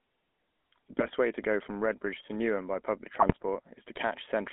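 From start to finish the sound has that buzzy, gravelly GSM full-rate codec character. The codec rebuilds each frame from a vocal-tract filter fed by a sparse, regularly spaced pulse train, so the fine texture turns rough. The damage is plainly audible, and the band is squeezed to roughly 200 Hz to 3.4 kHz, which fits the old 13 kbps full-rate coder.

Two bursts of GSM bit errors break through. The first runs from about 0.99 to 1.08 s, just before "way to go from". The second runs from about 3.20 to 3.33 s, right after "by public", and is longer and messier. In both, corrupted filter, pitch and gain values reach the decoder, so a handful of frames come out with a warped spectrum or a jumped level. You hear short squawks, pops and a gargly smear.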